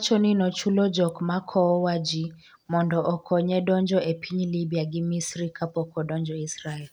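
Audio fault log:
1.09 s, electrical switching spike: a sharp snap, about 2 ms long, sits on top of the speech and peaks at about -25 dBFS, well clear of clipping. Its near-instant onset and decay, with no tonal body or echo, mark it as an impulse riding on the signal path rather than part of the acoustic sound. The likely cause is a brief arc from a nearby switch, motor or static discharge coupling into the audio line.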